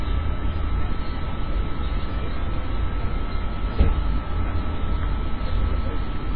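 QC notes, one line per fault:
Throughout, MP3 compression, likely: nothing is present above 4.9 kHz, so the treble is sharply cut and the sound is dull and boxy. The damage is heavy, with a watery, swirling texture as weak frequency components drop in and out between frames, plus metallic chirping on bright content and smeared attacks. A bitrate-starved encoder sacrifices high frequencies and faint detail first, and a damage level this severe points to a bitrate around 16 kbps.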